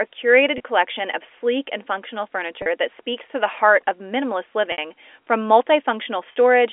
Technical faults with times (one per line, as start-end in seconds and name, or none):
0.58-0.60 packet loss with pitch repetition
2.62-2.66 packet loss with pitch repetition
4.72-4.78 packet loss with pitch repetition
6.32-6.35 packet loss with pitch repetition